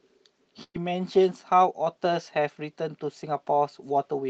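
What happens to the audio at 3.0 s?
Nothing goes wrong at 3.0 s: the speech carries on intact through that moment, with no dropout, glitch or distortion.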